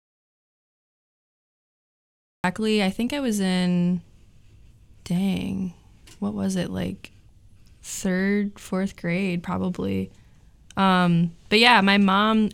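A speech clip that opens on an audio dropout to silence, already under way at the start and lasting until 2.44 s, where the sound enters abruptly mid-flow on "I think I was". Unlike a gated pause, the gap holds plain silence with no room tone, likely from the input being lost while recording continued.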